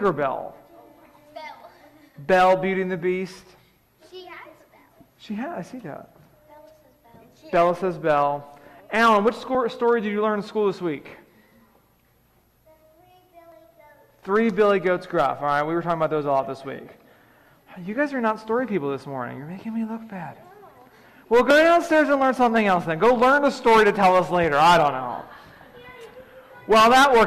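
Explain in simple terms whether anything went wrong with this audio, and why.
Five brief clicks or tiny skips, at 1.60, 7.57, 9.55, 13.52 and 21.51 seconds, come from overlap between stream segments. The audio arrives in 2-second pieces. Where two pieces claimed the same moment, a few milliseconds were trimmed away, so the sound jumps slightly.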